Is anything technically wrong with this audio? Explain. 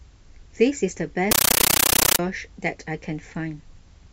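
Yes. From 1.31 to 2.19 s the speech gives way to a compressed stream played as audio: an AC-3 bitstream treated as plain samples rather than decoded. Each frame becomes a 13.3 ms noise burst then silence, 31.25 times a second, heard as loud chattering static. The waveform shows regular blocks, the spectrogram broadband vertical stripes.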